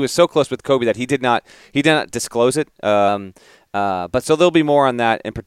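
A clock-matching buffer likely jumped its playback rate by 5.65% from 3.08 to 4.22 s, a drift correction step that raises the speech nearly a semitone before snapping back.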